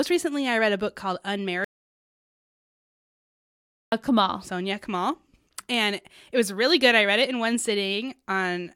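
At 1.64 s the speech cuts off mid-flow and the clip drops into dead digital silence until 3.92 s, a gap of about 2.28 s. That's an audio dropout to silence: no room tone, no hiss, so whatever was said in those two-odd seconds is simply gone. It sounds like the input was lost, most likely a disconnected device or a failed link, while the recorder kept writing blank samples, and then the voice snaps back just as abruptly.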